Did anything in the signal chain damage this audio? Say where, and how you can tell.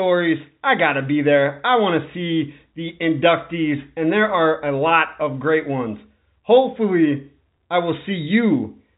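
No, nothing in the signal chain has damaged this speech. The path is G.711 telephone coding, A-law at 64 kbps, so the audio carries nothing above about 3.8 kHz, with at most a faint codec trace riding on the level of the speech.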